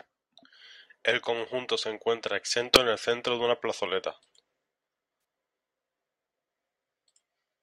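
Around 2.74 to 2.76 s the speech has a corrupt frame decoded: a few damaged frames get played anyway, giving a brief, fairly loud chirp, squeak, blip or burst of misplaced energy.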